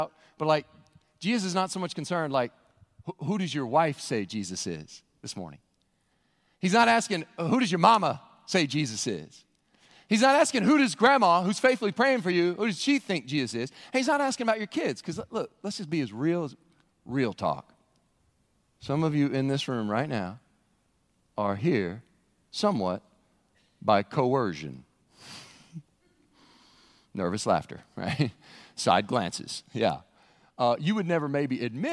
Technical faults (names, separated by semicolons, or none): none